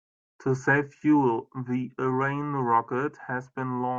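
Speech recording, with no technical faults to report. Nothing in it needs a time stamp, a cause or a fix.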